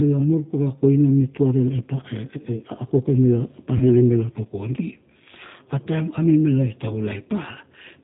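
Throughout the speech, the sound carries G.729 codec damage: with nothing above 4 kHz, it sounds dull. The rough, slightly synthetic texture comes from rebuilding each 10 ms frame with a vocal tract filter, a pitch predictor and sparse pulses, consistent with 8 kbit/s.

From 3.78 to 3.85 s, just before "tuk kondi", there is VoIP packet loss concealed by the speech codec. About 30 ms of audio went missing, which fits a single lost packet. The decoder extended its last pitch and filter at falling gain, producing a brief buzzy tone or coloured noise that fades, and the following syllables sound weakened while it recovers.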